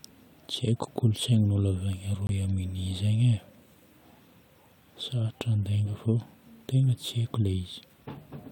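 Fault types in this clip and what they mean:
Corrupt frame muted: at 2.27 s the speech drops abruptly into silence and resumes at 2.30 s. The 36 ms gap likely comes from a decoder rejecting damaged compressed frames, with the player filling that span with silence, and its length fits two codec frames. The speech keeps its timing across the gap. On a waveform it shows as a flat-line notch with hard edges, and on a spectrogram as a narrow, fully blank vertical stripe across all frequencies.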